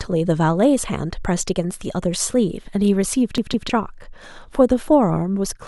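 Speech, with one clear fault. From 3.38 s to 3.70 s the audio sticks like a CD stuck on one turn. A fragment about 159 ms long plays twice over. A brief mute marks each jump back. The cause is the laser being thrown back one track at the same damaged spot on the disc. Each turn returns it to that spot, giving a fast, even stutter.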